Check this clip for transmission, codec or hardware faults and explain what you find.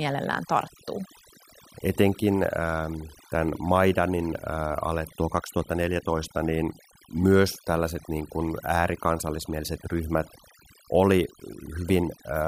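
One fault runs through the whole speech clip: overdone noise removal. A noise reduction stage was set too aggressively. It compares each frequency band against its estimate of the background noise. Any band that comes close gets pushed right down or switched off. The quieter parts of the voice fall below that line too, so they vanish with the noise. The gaps between phrases drop in level, speckled with twinkling artefacts.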